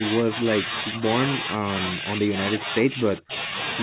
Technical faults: speech suppressed in double talk

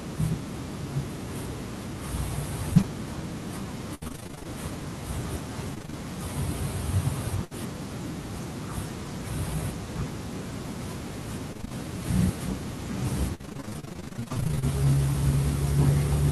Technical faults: repeated packet loss (robotic sound)

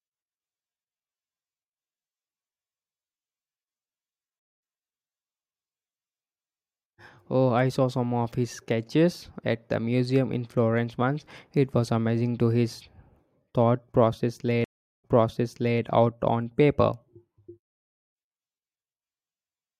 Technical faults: stream reconnect

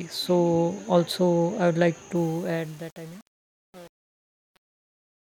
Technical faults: truncation distortion on a fade

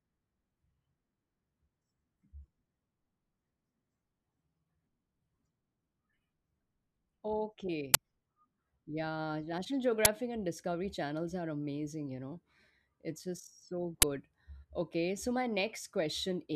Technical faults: uninitialised buffer

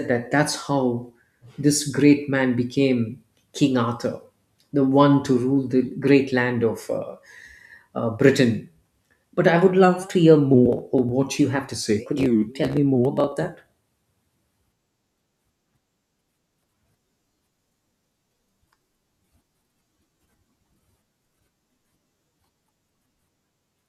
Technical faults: none

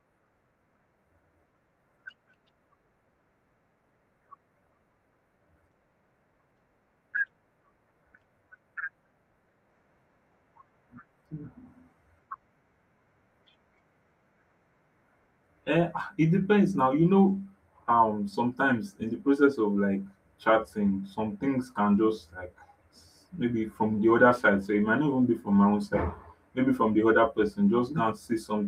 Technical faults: none

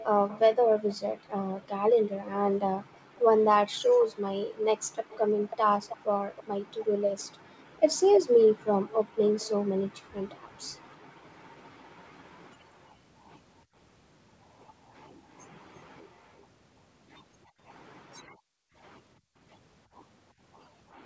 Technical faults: echo leak; background gated by the echo canceller

